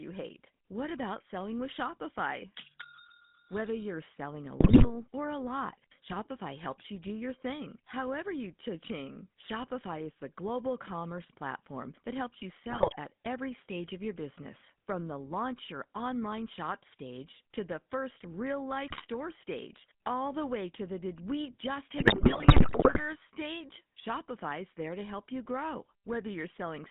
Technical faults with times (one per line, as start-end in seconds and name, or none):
0.00-26.90 GSM full-rate codec
4.60-4.88 GSM bit errors
12.70-12.94 GSM bit errors
18.88-19.05 GSM bit errors
21.98-23.02 GSM bit errors